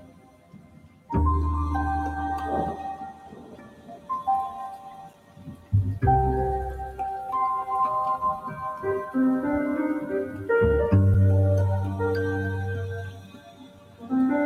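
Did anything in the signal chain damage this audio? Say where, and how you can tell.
Yes, in two places. The first is call processing: a noise suppressor built for speech was applied to this audio, which is not speech. Its gain swings by roughly 15 dB, and the sound is cut by the noise suppressor, dropping about 16 dB from 0.0 to 1.1 s and from 2.77 to 4.1 s, and about 15 dB from 4.5 to 5.73 s and from 12.99 to 14.12 s. There is a milder dip of about 5 dB from 10.27 to 10.46 s. Sustained material and tails sink while attacks punch through, which is why it sounds like suppression rather than a fade or a level ride.

The second is in the transport or playback stage: there is a gap between chunks. Holes of 6.5 ms appear at 5.13 s and 11.14 s, exactly 6 s apart, which points to audio delivered in 6-second blocks with padding or a late start at each join. Nothing is missing around the holes; the sound resumes where it left off. 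That, together with the strict spacing, separates it from packet loss, which drops material at irregular times.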